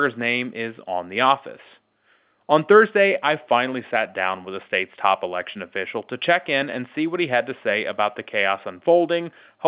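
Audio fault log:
Nothing to log here: the speech comes through the A-law telephone coding just as that format should, with the usual narrow phone-line band and nothing out of place.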